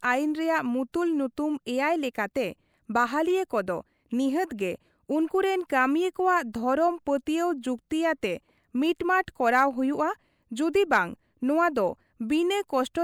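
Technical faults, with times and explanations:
No technical faults can be heard in this recording.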